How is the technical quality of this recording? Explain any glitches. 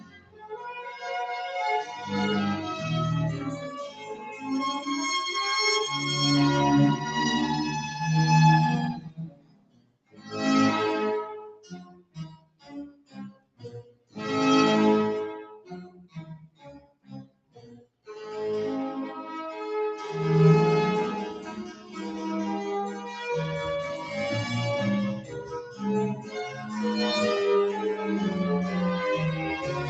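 The recording has a clear processing fault: a speech noise suppressor is running over non-speech sound for the whole clip. It passes through call microphone processing, which keeps nothing above 8 kHz.

Noise suppressor applied to music or sounds: Throughout, a suppressor built for speech judges sustained, steady content to be background noise and pulls it down. Its gain swings by roughly 15 dB as the material changes. The result is pumping and fluttering, with sustained parts and decays thinning out while sharp onsets survive. A compressor would react to loudness. This reacts to how steady the sound is, so quiet transients mostly pass and loud held tones get cut.

Sound cut by the noise suppressor: At specific moments the suppression bites harder than elsewhere:
0.0–0.68 s (about 15 dB)
3.88–4.45 s (about 9 dB)
8.94–10.35 s (about 20 dB)
11.52–14.17 s (about 20 dB)
15.59–18.08 s (about 20 dB)
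21.73–21.93 s (about 5 dB)
25.21–25.82 s (about 9 dB)
26.15–26.71 s (about 8 dB)

The three long stretches in the middle have the deepest drops. Held sound sinks, and tails die early. Unlike a dropout, the signal never vanishes abruptly. It fades under gain control while attacks still come through.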